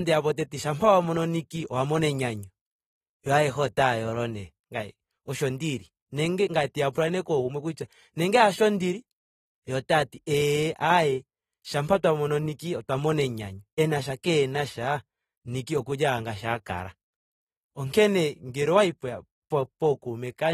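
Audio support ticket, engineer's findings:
Whole clip: speech dull and smeared, nothing above 13.9 kHz, plainly audible codec damage, warbling and fizz on sustained sounds and sibilants. Likely AAC compression, AAC-LC at a low bitrate, consistent with roughly 38 kbps. Quantiser starved of bits, so the encoder lowers the bandwidth and leaves spectral holes across the 1,024-line frames.

6.92 to 6.95 s: short hiss, 30 ms, ahead of a sharp attack, which sounds softened. Pre-echo from the same transform codec. The attack lands late in a block, and quantisation noise sized for the loud part spreads into the quiet stretch before it.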